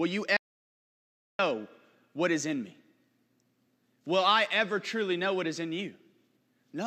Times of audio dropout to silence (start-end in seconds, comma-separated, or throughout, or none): 0.37-1.39